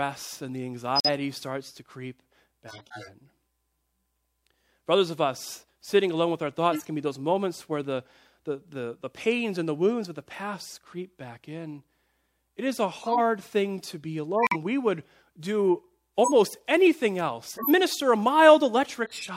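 Speech, with two kinds of bitstream damage. Corrupt frames muted: abrupt silent holes at 0.96–1.08 s and 14.39–14.56 s, as the decoder rejected damaged frames, which fits two and four lost frames. Corrupt frames decoded: short chirps and noise bursts at 2.68–3.09 s, 6.72–6.89 s, 12.94–13.19 s, 16.24–16.32 s, 17.55–17.70 s and 19.03–19.29 s. Flipped bits put energy at wrong frequencies, peaking at about -20 dBFS and, in the 12.94, 16.24 and 17.55 s events, about -10 dBFS.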